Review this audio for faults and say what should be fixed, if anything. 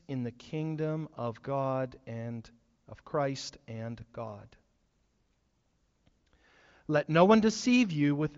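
No faults; nothing needs fixing.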